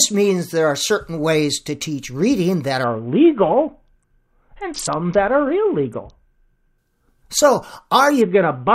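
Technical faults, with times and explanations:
2.84–6.78 s and 8.21–8.74 s, Bluetooth SBC bit pool drop: The speech turns dull and gritty. The treble dulls and coarse noise rises, which fits the encoder starving the top sub-bands when the bit pool falls from 28 to 6, around 60 kbps.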